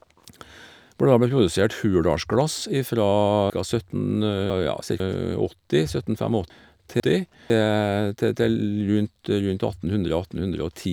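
Between 3.5 and 5.0 s a 500 ms chunk plays two chunks late, and between 6.5 and 7.5 s another plays one chunk late: chunks out of order. Each is a jumbled moment, but unlike a dropout nothing goes missing.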